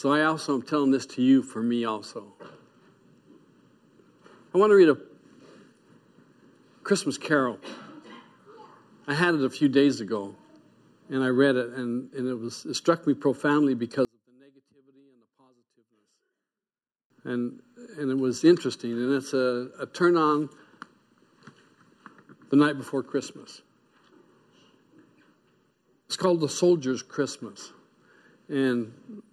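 Between 14.05 and 17.1 s, one stereo channel has likely had its polarity flipped, a one channel inverted fault. Summed to mono, the shared centre content cancels, so the level drops by about 36 dB and the sound nearly vanishes, leaving only a faint residue.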